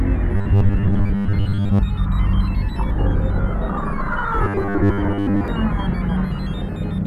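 From 0.36 to 1.83 s and again from 4.44 to 5.48 s, the music turns into a robotic sound from repeated short buffers, a metallic 100 Hz buzz, likely from 10 ms chunks looping while most new audio is skipped. The fixed buzz pitch, rather than gaps, separates it from dropouts.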